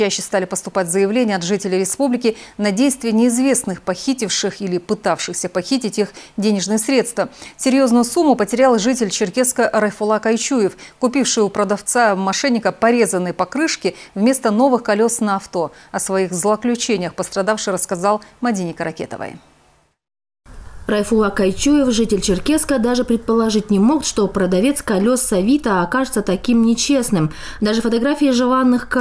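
No dropouts, distortion, noise bursts or timing faults turn up anywhere in the audio.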